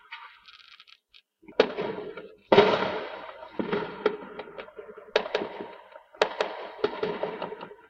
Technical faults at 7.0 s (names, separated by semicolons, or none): doubled audio track